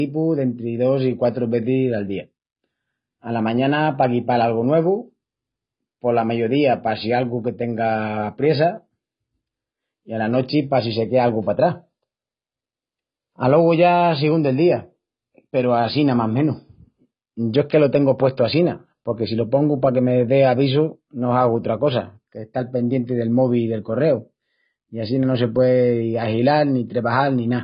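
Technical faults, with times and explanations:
Throughout: AAC compression. The speech is dull and muffled, with nothing above 5.1 kHz. Sibilants turn thin and fizzy, and sustained sounds warble and smear. The likely cause is AAC-LC coding at a very low bitrate, which fits about 16 kbps. With so few bits, the encoder drops the upper band entirely. It also quantises the remaining frequency lines coarsely, leaving gaps and noisy patches in the spectrum. The damage is heavy.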